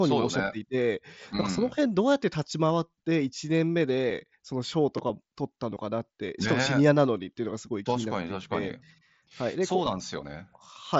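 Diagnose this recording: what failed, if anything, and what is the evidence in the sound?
Nothing failed in this recording.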